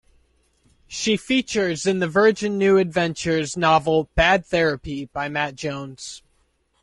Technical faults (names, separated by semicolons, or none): low-delay AAC compression